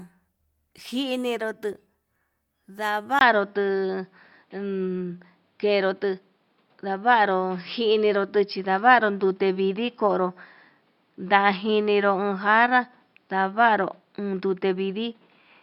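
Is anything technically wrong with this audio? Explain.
Yes. From 3.19 s to the end, the input was likely switched to a poorer device, either another microphone or a headset's call profile, which passes a narrower band and brings its own tone, level and noise. After a 20 ms silence at the switch, the speech loses everything above 5.3 kHz and turns duller, its level shifts by around 5 dB, and a new background noise appears about 45 dB below the speech.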